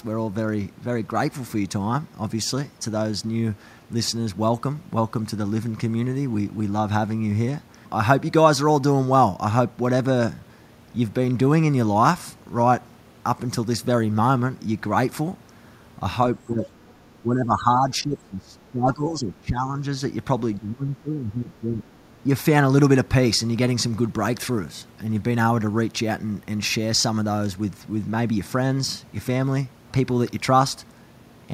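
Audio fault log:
16.45 to 21.84 s: speech suppressed in double talk. The speech level dips by about 10 dB at 16.45 to 16.64 s, then by about 20 dB in broken stretches at 17.19 to 19.68 s and 20.58 to 21.84 s. This is likely an echo canceller turning down the near talker along with the echo while both sides spoke.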